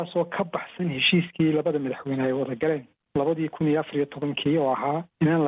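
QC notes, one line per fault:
No faults to note for this clip.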